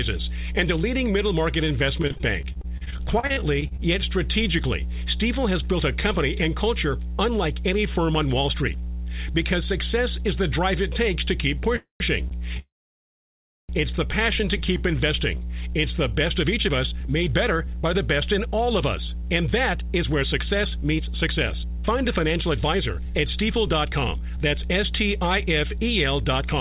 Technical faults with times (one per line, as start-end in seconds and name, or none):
0.00-26.60 mains hum
2.02-3.80 repeated packet loss (robotic sound)
11.76-12.02 call audio freeze
12.28-12.33 short stall from a late packet
12.59-13.71 call audio freeze
16.43-26.50 jitter buffer speed-up